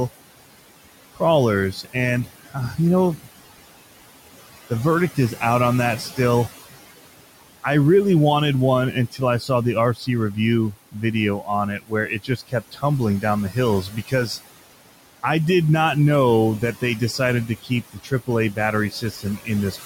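Throughout, the noise suppressor strips about 17 dB of steady background band by band, causing noise suppressor artifacts: the residue sinks between phrases and rises under the words.

It also mistakes parts of the speech for noise, producing speech cut by the noise suppressor at 1.15–3.27 s, 8.93–14.13 s and 16.61–19.85 s. Soft consonants and word endings drop by about 14, 19 and 17 dB and sound swallowed, most in the middle stretch.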